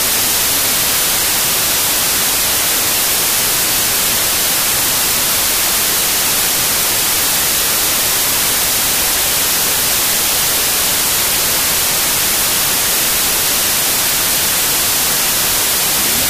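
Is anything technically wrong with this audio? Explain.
Yes. A wrong sample width runs throughout. Audio written as 32-bit integers is read as 16-bit. Each sample splits in two, so loud noise buries it, and it plays at half speed, an octave low.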